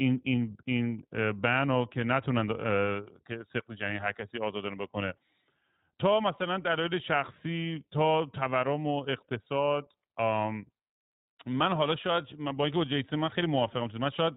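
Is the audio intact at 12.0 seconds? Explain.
No. From 12.02 to 12.05 s there is a brief gap from lost iLBC frames, consistent with a single dropped 20 ms frame. The decoder fills the hole by repeating the last pitch cycle blended with noise, so you hear a short held, faintly buzzy vowel-like sound before normal speech snaps back. Because each iLBC frame decodes on its own, the recovery is nearly immediate. On a waveform the concealed stretch shows a few near-identical periodic cycles. A spectrogram shows smeared, static harmonics for that sliver.

The moment also carries the iLBC codec's constant coloring, and the damage is plainly audible. The sound is strictly narrowband. Nothing above 4 kHz survives, so a spectrogram shows a hard ceiling at 4 kHz with an empty band above it. The codec builds each frame's excitation independently, and the character fits a 20 ms frame mode. The result is clear but slightly rough and synthetic.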